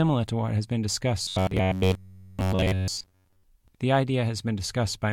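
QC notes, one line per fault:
1.23–3.43 s, robotic sound from repeated short buffers: rigid metallic 93.8 Hz buzz, likely an 11 ms chunk looped; spectrogram shows flat, evenly spaced harmonics.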